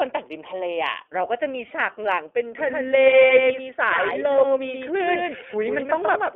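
The whole recording has passed through the iLBC codec, a narrowband VoIP coder that handles each frame of excitation independently. Its bandwidth points to a telephone-style channel running from 300 Hz to 3.4 kHz, with nothing above. Its frame length fits the 30 ms, 13.33 kbps mode. The coding damage is plainly audible: the speech stays intelligible but sounds rough and somewhat synthetic, with the thin, boxed-in tone of a phone line.

At 1.67 to 1.71 s the clip has lost iLBC frames, a single 30 ms frame that never reached the decoder. The decoder covered the hole by repeating the last pitch cycle blended with noise, so for that instant the sound turns into a brief held, slightly buzzy vowel. Since each iLBC frame stands on its own, normal speech resumes straight away.

From 2.58 s to the end, the audio is a doubled audio track. A second full-band copy of the same speech, roughly 5 dB quieter, trails the original by about 150 ms. 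This is likely because the signal was captured again through a slower path and mixed back in. The copy has no reverberant tail or room colouring. It starts abruptly.

At 3.27 to 3.30 s, another 30 ms frame of lost iLBC frames produces the same short buzzy filler before the speech snaps back.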